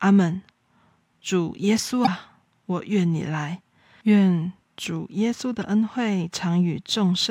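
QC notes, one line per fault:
2.03–2.08 s, damaged data in a compressed stream: a brief glitch, as the decoder hits corrupted bytes, loses frame sync and jumps to the next header.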